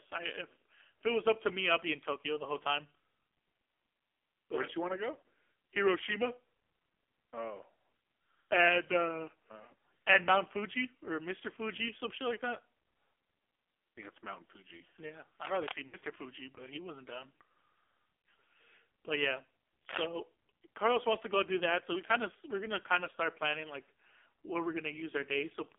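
AMR narrowband mobile codec, throughout: the speech passes only from 300 Hz to 3.5 kHz, and heavy codec damage makes the voice buzzy and synthetic. The codec rebuilds each 20 ms frame from a vocal-tract model excited by a few pulses, and at this low a rate, which fits about 5.9 kbps, there are too few bits to capture the natural texture of the sound.

Cable scratch noise, 15.45 to 15.76 s: a dense, uneven burst of scratchy rustling sits over the speech, only a little below its level. This is likely a worn cable or connector being moved, so that its contact resistance flickers rapidly.

Lost AMR speech frames, 15.88 to 16.15 s: the speech smears and dips, then returns rough, in a disturbance that sounds like two missing frames, about 40 ms of speech. When the frames failed their checksum, the decoder reused the last good pitch and vocal-tract settings at falling gain, and the voice needs a moment to recover afterwards.

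Lost AMR speech frames, 18.22 to 18.24 s: a brief dip and warble of about 20 ms, consistent with a single concealed frame.

Cable scratch noise, 19.89 to 20.06 s: a second, shorter burst of scratching at a similar level, again likely from a disturbed contact.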